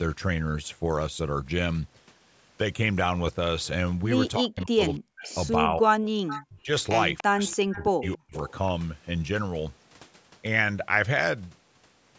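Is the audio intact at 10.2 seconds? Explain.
Yes, the speech at 10.2 seconds is intact, with nothing there beyond the ordinary call microphone processing that trims the lowest bass and leaves no content above 8 kHz.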